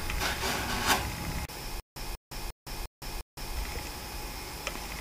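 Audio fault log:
1.80–3.56 s, stutter with silent gaps: the same 190 ms scrap of sound keeps coming back, five times over, each one followed by about 163 ms of dead digital silence, so it pulses at a steady 353 ms beat. That's most likely the player or stream stalling and, on every retry, replaying its last buffered fragment before running dry again. Whatever should have played through that stretch is simply gone.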